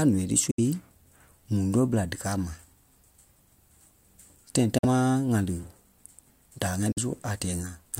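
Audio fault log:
0.51–0.60 s, 4.78–4.85 s, 6.92–6.98 s: Bluetooth dropout. The speech cuts to silence for 65 to 87 ms, then resumes further on. This likely comes from packets arriving too late and being dropped.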